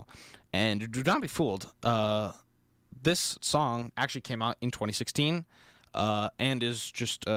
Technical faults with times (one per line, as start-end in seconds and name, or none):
none